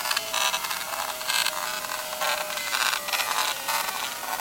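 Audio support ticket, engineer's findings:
Low bit depth without dither, throughout: likely requantisation to about 5 bits, rounded with no dither. Error tracks the signal, roughly 10 dB below it, so the audio is coarse and grainy, gritty on quiet passages, with the faintest parts sputtering or dropping out.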